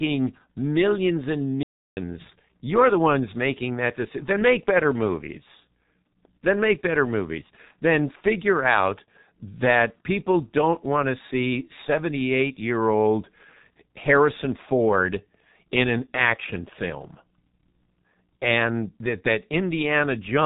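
Playback stall at 1.63 to 1.97 s: right after "millions and", the speech cuts to silence for about 0.34 s and then carries on. The player most likely ran short of data or had its output thread held up, so nothing reached the output until it caught up. The G.723.1 codec affects the whole of this speech recording. Nothing comes through above 4 kHz, which makes the voice muffled. Heavy coding damage leaves it hoarse, with smeared consonants, because the codec's coarse 30 ms frames and slowly updated voice model cannot follow fast changes. That degree of damage fits the codec's rate of about 6 kbit/s.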